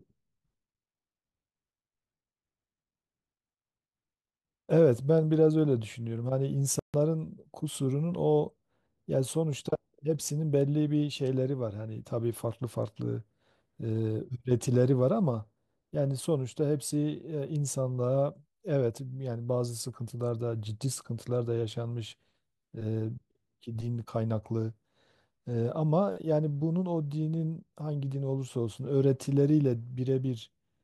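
At 6.79 s the speech cuts out for about 145 ms, ending at 6.94 s: a playback stall, likely the player starving for data or its thread being blocked. On a waveform it shows as a flat gap. A spectrogram shows a blank vertical band before the sound resumes.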